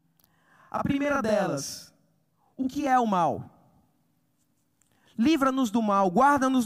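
Channel delay (doubling) runs from 0.0 to 2.87 s. One channel of the recording arrives about 42.67 ms behind the other, which fits a 2048-sample buffer, and the two channels are summed to mono. The late copy is heard at the same level as the original, so the speech sounds doubled, with a single slap echo following each sound. The doubling stops after 2.87 s.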